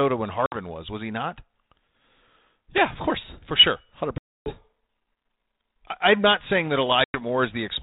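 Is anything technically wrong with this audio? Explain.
Yes. Packet loss on an ADPCM call cuts three hard-edged silent gaps: 60 ms at 0.46 s before "was was he not", 280 ms at 4.18 s after "course for sure hundred", and 100 ms at 7.04 s after "I'm not saying that". Each dropout desynchronises the decoder's adaptive predictor and step size from the sender's, so the speech resumes slightly distorted.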